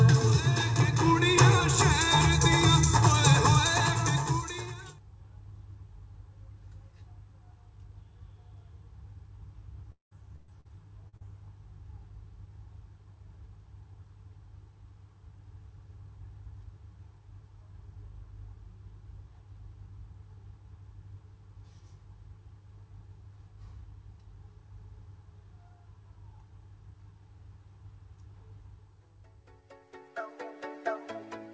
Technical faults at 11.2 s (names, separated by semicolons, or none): short concealed packet loss